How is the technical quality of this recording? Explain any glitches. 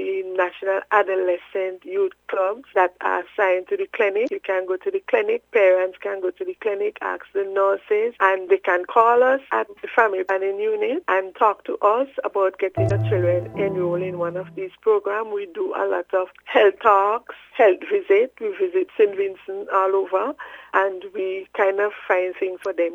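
Four short glitches affect the recording, all damaged data in a compressed stream, at 4.25, 10.26, 12.87 and 22.61 s, each about 40 ms long. The decoder misreads corrupted frames and resynchronises, producing a brief chirp, squawk, click or short hole.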